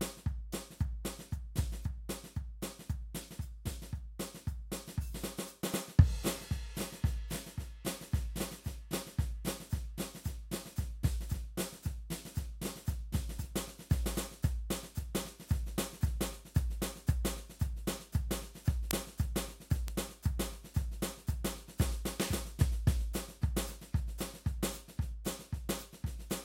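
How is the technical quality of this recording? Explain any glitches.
The music's marred by three bit error spikes, at 18.91 s, 19.88 s and 25.71 s. Each is a single flipped bit knocking one or two samples off by a power of two, so you hear a sharp broadband tick, loudest at 18.91 s, peaking about -2 dBFS.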